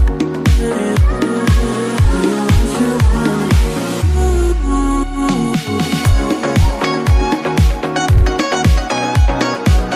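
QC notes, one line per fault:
8.17–8.22 s, repeated frames: a block of about 52 ms of sound, which fits two compressed frames, is played twice in a row, causing a brief stutter. The duplicated data reaches the decoder again, so that slice repeats and the clip runs 52 ms longer.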